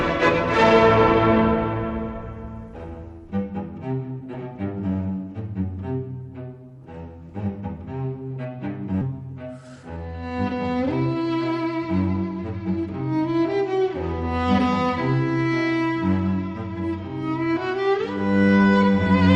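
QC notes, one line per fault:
9.01–9.03 s, skip ahead: About a second of audio is missing. It was dropped while later audio was already queued, so playback jumps straight forward. There is no fill and no gap, and the two sides are joined almost directly.
9.62–9.98 s, jitter buffer speed-up: The buffer held more audio than its target, so short pitch-period pieces were cut out many times in a row. About 70 ms went in total. The audio runs roughly 14% faster at the same pitch and sounds hurried.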